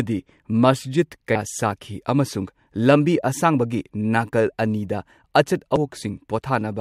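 At 5.76 s a brief glitch cuts into the speech, the sign of damaged data in a compressed stream: corrupted bytes make the decoder misread a frame and resynchronise.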